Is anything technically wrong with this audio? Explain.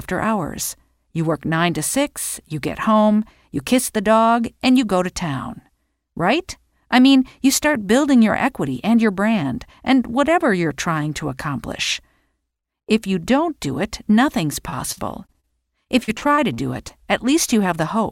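Yes. Repeated packet loss (robotic sound) appears in two stretches, from 14.69 to 15.48 s and from 15.84 to 16.91 s. Within each, data went missing in several short bursts, the longest about 43 ms and 45 ms. Each hole was covered by stretching the preceding sound forward, which concealed about 18% and 16% of the two spans. The sound turns choppy, with brief smeared repeats and clipped-off fragments.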